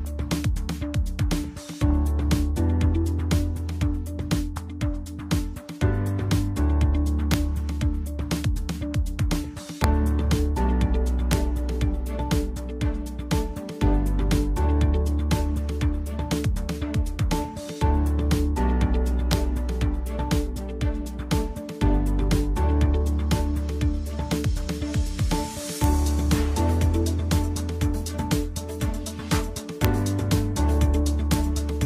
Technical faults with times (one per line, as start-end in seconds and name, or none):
7.34 integer overflow
9.84 integer overflow
11.33 integer overflow
19.33 integer overflow
25.84 integer overflow
29.85 integer overflow
31.34 integer overflow